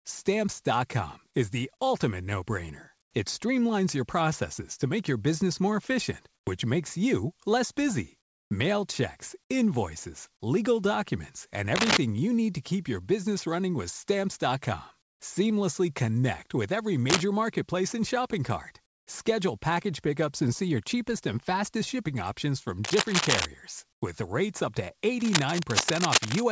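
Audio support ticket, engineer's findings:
Comfort noise in place of the background: background in short pauses swapped for smoother, quieter synthetic noise, about 7 to 19 dB down, lasting 90 to 300 ms. Occurs at 3.02–3.14 s, 6.35–6.47 s, 8.21–8.51 s (after "makes you less busy"), 15.02–15.20 s, 18.86–19.07 s and 23.93–24.02 s. Likely discontinuous transmission on the sender, with the receiver synthesising fill noise.

Cable scratch noise: dense, uneven scratching bursts, roughly as loud as or louder than the speech. Occurs at 11.76–11.99 s (between "invoices legal documents and" and "you need to keep"), 17.10–17.27 s, 22.84–23.46 s (after "fastest shipping options from") and 25.20–26.44 s. Likely a worn cable, connector or control carrying DC, whose contact resistance fluctuates when moved.

Call path: nothing above 8 kHz, consistent with a G.722 codec.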